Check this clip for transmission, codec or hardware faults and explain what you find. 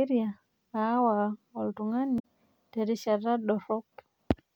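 One fault is present. From 2.16 to 2.22 s, damaged data in a compressed stream makes the decoder misread corrupted frames and lose sync, leaving a brief glitch in the speech.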